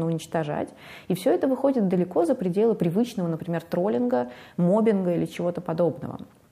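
No technical faults can be heard anywhere in the clip.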